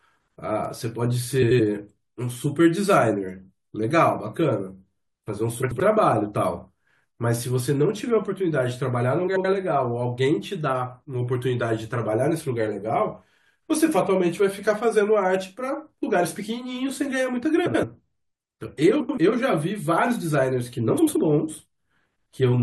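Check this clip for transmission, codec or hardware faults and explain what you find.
Two kinds of fault are present: a single bit error spike and six instances of frames out of order.

The bit error spike is at 0.65 s. One sample carries a value that jumps by a power of two and falls straight back, the result of a single flipped bit in memory or on a digital link. It is heard as one sharp, broadband tick that has no relation to the surrounding speech.

The frames out of order occur at 1.42–1.60 s, 5.62–5.80 s, 9.27–9.45 s, 17.66–17.84 s, 19.00–19.18 s and 20.98–21.17 s. In each, two adjacent blocks of about 85.3 ms were decoded in swapped order, which fits runs of four frames apiece. The stretch plays with its halves exchanged, giving a brief garbled flutter. No time is lost, so the timing after each stretch stays intact.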